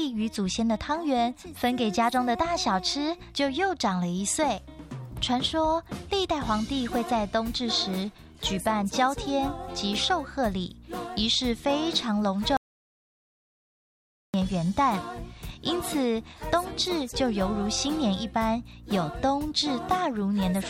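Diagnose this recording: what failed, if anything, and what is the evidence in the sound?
At 12.57 s the sound stops mid-flow and the clip falls to silence, with no room tone or noise floor underneath, until it resumes abruptly at 14.34 s. That is an audio dropout to silence lasting about 1.77 s, and whatever occurred in that span is simply absent. The cause is likely at the capture or link stage: the input was lost through a disconnected device, failed connection or momentary mute while the recorder kept writing silence.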